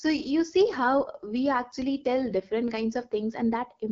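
AMR wideband (HD Voice) coding runs through the whole speech clip at 8.85 kbit/s, one of the codec's two lowest rates. The vocal tract model is starved of bits, so the voice sounds plainly rough and raspy, and nothing is heard above 7.3 kHz. A bit error spike at 2.64 s produces one sharp, broadband tick unrelated to the speech. A flipped bit made the sample value jump by a power of two and snap straight back, and the tick's brevity fits a single corrupted sample.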